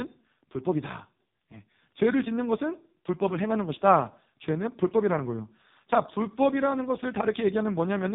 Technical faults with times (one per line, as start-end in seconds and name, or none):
0.00-8.15 AMR narrowband mobile codec